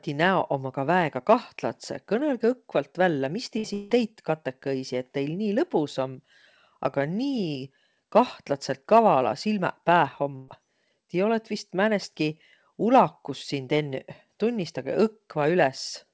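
Just after "vällä mis", at 3.58 s, there is a burst of packet loss. A short run of audio never arrived in time. The receiver kept the last sound going for about 56 ms, fading it out. That patch sounds like a brief held buzz or fading hiss. The speech then resumes about 60 ms further on, with that stretch gone.

At 3.74 s a longer filled gap follows, lasting 0.18 s. The last sound is again stretched out as a fading buzz or hiss. It never drops to full silence. Speech comes back about 160 ms further on, with the part in between missing. This is likely a long network dropout.

At 10.36 s comes a second burst of packet loss, about 0.14 s long. The concealment fills about 121 ms with a decaying continuation of the sound. Then the speech picks up about 120 ms later than it should. The call path carrying all of this has nothing above 8 kHz, which fits a G.722 call codec.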